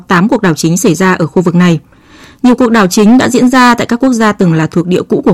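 Throughout the clip, the speech was pushed about 9 dB beyond what some stage in the chain could pass. That stage cut the peaks off flat, so this is hard clipping. Roughly a tenth of the waveform lies in those flattened regions. The squared-off tops add harmonics high up the spectrum, so the louder stretches of speech carry a buzzing distortion that rides on the peaks from start to finish.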